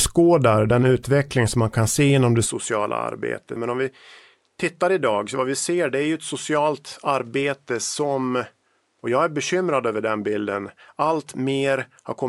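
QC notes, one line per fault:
2.46 s to 12.28 s, input switched to a poorer device: right after "kan se inom det" the speech turns duller and slightly quieter, down around 5 dB, with no gap at the change. The likely cause is a switch to a narrower-band microphone with its own noise. On a spectrogram, energy ends abruptly at 11.4 kHz from that point, over a faint new noise floor roughly 45 dB below the speech. The waveform envelope steps down slightly.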